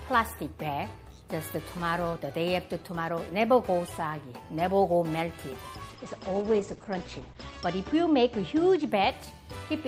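From 5.9 s to 8.95 s the sound turns rough and watery, and its top end dulls, with content above roughly 8 kHz disappearing where it had reached up to 20 kHz before. The degradation is at its worst for about 1.7 s before clarity returns. This is a call bitrate drop. The bandwidth estimate fell, so the encoder coded far more coarsely and trimmed the high frequencies, consistent with a fall from about 48 kbps to about 12 kbps.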